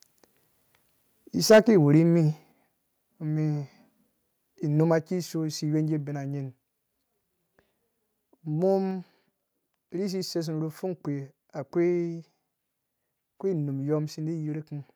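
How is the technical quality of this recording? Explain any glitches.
The recording has two related faults in its first few seconds: a short burst of microphone overload, and two stepwise drops in microphone level that follow it.

From 1.5 to 1.59 s the speech distorts with a harsh, crackly edge. The likely cause is microphone overload. The input gain was set so high that the waveform ran about 8 dB past the converter's full scale, and roughly a third of the samples in that stretch are flattened at the limit. Squaring off the tops of the waveform adds dense harmonic distortion, which is why the loudest moment sounds broken up.

At 1.52 s, inside that distorted burst, the overall level drops by about 2 dB. At 2.52 s it drops again, more sharply, by about 5 dB. Both changes are abrupt steps, with no gradual fade. This pattern is likely the microphone volume being stepped down by the call software after it detected clipping. 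Because the device's input gain is lowered, the speech and the background fall together and stay at the new, quieter level.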